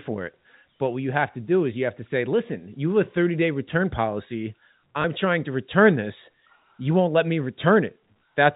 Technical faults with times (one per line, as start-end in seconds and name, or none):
5.02-5.04 packet loss with last packet repeated